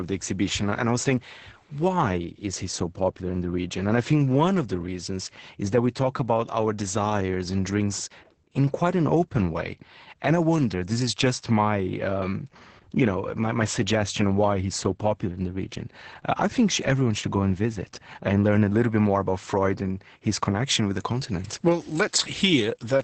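The speech in this clip carries Opus voice compression from start to finish, with heavy codec damage. The coder is running in SILK mode at wideband, so nothing survives above 8.6 kHz. Its coarse excitation coding leaves the voice muffled, hoarse and faintly robotic, which points to a bitrate around 10 kbps. From 20.66 s, just after "and his", to the end, pre-emphasis is left on. A 75 µs FM-style treble boost was applied without the matching de-emphasis, lifting highs by about 14 dB at 10 kHz relative to 1 kHz and making that closing stretch thin, bright and sibilant.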